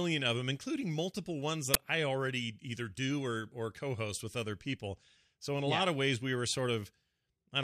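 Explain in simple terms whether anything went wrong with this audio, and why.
At 1.74 s, between "them including multiple ones" and "I already either do", the playback system sent out a block of memory before any real audio had been written into it. That is an uninitialised buffer. Leftover data played as sound, giving a loud, harsh crack about 10 ms long.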